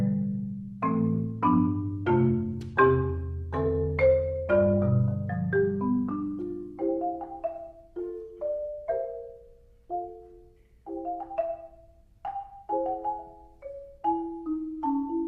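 The audio drops to an adaptive stream at a lower bitrate from 1.05 to 5.05 s. Codec artefacts grow stronger, fitting a switch from about 64 to 24 kbit/s Opus. Unlike a dropout, it switches abruptly without any gap and then recovers.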